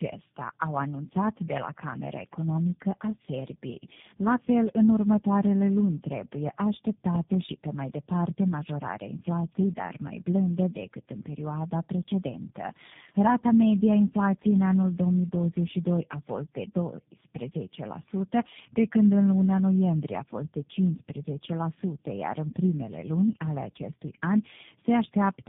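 Speech that has clearly been through tandem speech coding for the whole clip: it sounds like three low-rate speech coders in a row, each re-encoding the previous one's damage, so it's rough, muffled and warbly, with nothing above about 3.7 kHz.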